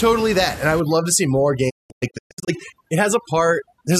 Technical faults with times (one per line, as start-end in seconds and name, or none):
0.80-3.99 overdone noise removal
1.69-2.49 digital broadcast dropout